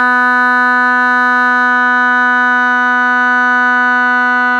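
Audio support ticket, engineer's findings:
Music reviewed; no faults found, nothing to escalate.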